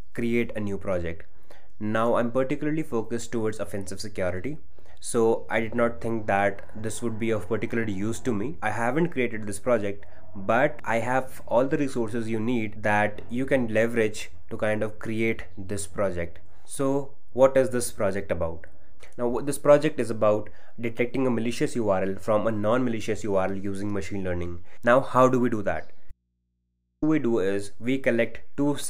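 The whole clip sits on a DC offset, so the waveform is shifted off zero, eating headroom and leaving steady energy at the very bottom of the spectrum. At 26.11 s there's an audio dropout to a faint residue. The sound cuts out for 0.91 s, until 27.02 s, leaving only mains hum roughly 50 dB down. That's likely a break upstream while the input stayed live.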